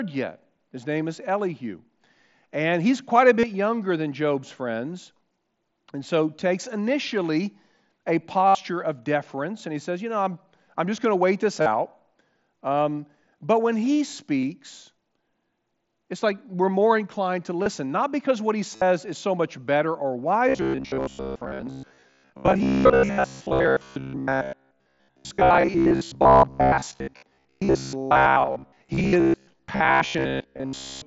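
Concealed Bluetooth headset packet loss hits the mSBC headset link at 3.39, 8.48, 11.61 (after "going to wait this"), 14.41 (after "but when he"), 17.63, 18.75 and 26.67 s, lasting about 15 to 68 ms. Each gap is filled by copying a recent waveform stretch, leaving a brief buzzy hold, then a warble on resumption. From 20.49 s to the end, a rigid metallic buzz near 67 Hz overlays the audio, likely from repeated short buffers (which fits a buffer of about 15 ms). Unlike the isolated concealment blips, this effect is continuous, at a constant pitch, and skips most of the real audio.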